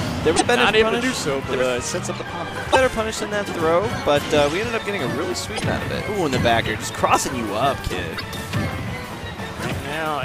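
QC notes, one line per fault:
0.33–0.42, 2.68–2.76, 5.53–5.62 and 8.14–8.23 s: damaged data in a compressed stream. At each point, corrupt bytes make the decoder misread frames and hunt for the next valid header, producing a chirp, squawk, click or short hole. Each shows as a roughly 90 ms disturbance on a spectrogram and as a jagged discontinuity in the waveform.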